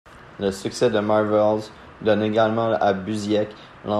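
Nothing in the speech stood out as a technical fault on listening.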